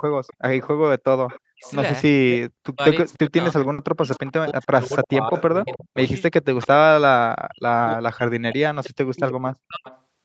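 From 0.27 to 0.61 s a faint delayed copy of the speech appears, about 25 dB below it. This is an echo leak, likely from a far-end loudspeaker the echo canceller did not fully cancel. The copy trails the speech by 306 ms.

From 1.27 to 1.73 s the echo returns, louder, about 20 dB down. Within it, from 1.39 to 1.67 s, the speech itself sinks by up to roughly 40 dB. This is speech suppressed in double talk. The canceller likely mistook the talker for echo and ducked both.

From 2.29 to 6.7 s the suppression recurs in pieces, about two seconds in total. The speech dips, thins and drops out. From 3.07 to 6.09 s the echo leak is stronger, about 15 dB under the speech.

At 3.73 s comes a burst of packet loss. The last sound is stretched for 50 ms as a fading buzz or hiss. Then 50 ms of audio is simply gone, and the speech resumes further on.

From 7.38 to 9.87 s double-talk suppression cuts the speech again, about two seconds in all. 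From 9.27 to 9.99 s the delayed echo comes back, about 15 dB down. Throughout, the band stops near 8 kHz, as the call path sets it.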